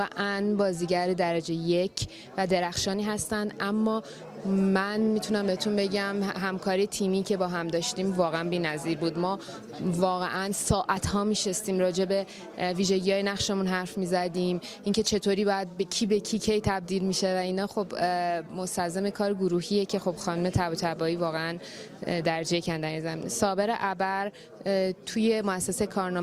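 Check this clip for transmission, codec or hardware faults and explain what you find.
Two brief discontinuities stand out, at 10.97 s and 14.37 s. Each is an abrupt jump in the sound with no gap of silence. The likely cause is a dropped buffer (overrun). Samples were overwritten before the software collected them, so a chunk vanished and its neighbours were spliced together. Roughly 10 ms is missing at the first point and only a few milliseconds at the second.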